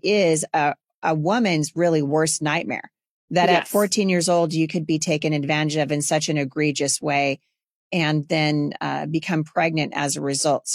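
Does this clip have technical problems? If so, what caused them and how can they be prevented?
No technical problems are audible.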